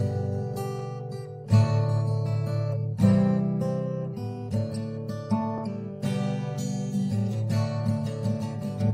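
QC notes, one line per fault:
No faults detected.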